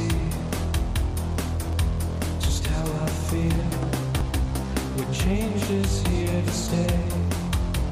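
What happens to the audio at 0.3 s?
Nothing goes wrong at 0.3 s; the audio plays through that moment intact, with no dropout, click or distortion.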